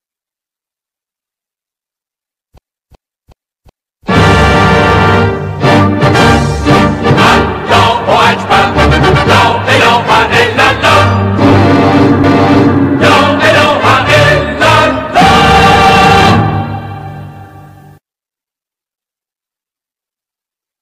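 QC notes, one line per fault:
2.58–4.07 s, repeated frames: a run of compressed frames, consistent with four frames spanning 371.5 ms, was sent or written four extra times, so the decoder replays the same stretch. This produces a stutter and adds 1.49 s.
12.24–12.80 s, repeated frames: a longer run, consistent with six frames totalling 557.3 ms, was duplicated once. The passage is heard twice in succession, and the clip is 0.56 s longer.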